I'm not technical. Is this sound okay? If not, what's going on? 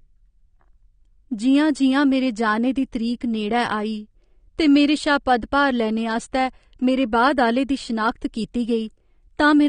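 No. The whole speech clip sounds dull and smeared, with nothing above 9.7 kHz, likely from AAC compression squeezing the file too hard.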